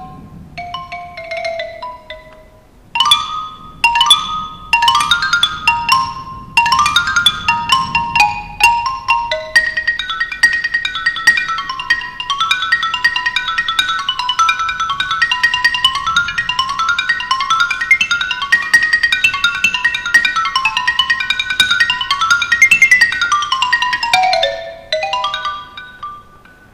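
Hard clipping runs through the whole clip: the signal is driven about 9 dB past what one stage can carry, so about 0.7 percent of samples hit the ceiling and their peaks are sliced flat. That gives brief crackle on the loudest moments, with harmonics reaching high up the spectrum, unlike the rounded, warmer thickening that soft saturation would add.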